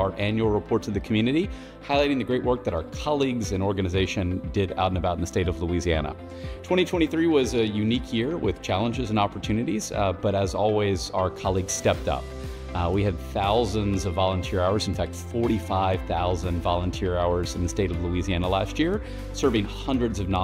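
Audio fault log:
No faults are heard in this audio. Nothing in it calls for a time or range in this log.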